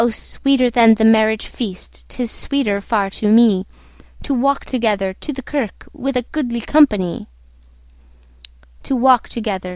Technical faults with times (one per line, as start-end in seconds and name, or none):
none